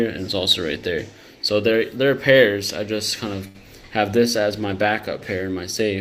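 At 3.47 s a short stall from a late packet holds the sound for about 72 ms, until 3.57 s. The packet arrived after its playout time, the jitter buffer ran dry, and the receiver stretched the last moment of audio to bridge the gap. It then resumed where it left off, so nothing is lost and everything after is about 72 ms late. On a spectrogram the partials run flat and unchanging across that span. The waveform shows a repeated, slightly dipping cycle, heard as a brief held buzz.

From 4.15 s to the end a call bitrate drop sets in. The bandwidth estimate fell and the encoder switched to far fewer bits, which fits a fall from about 64 kbps to around 19 kbps. It stays at its lowest for about 1.17 s. The audio turns rough and watery and loses its upper range. On a spectrogram the high-frequency energy is cut off above a flat ceiling, and the remaining bands look blotchy and coarse.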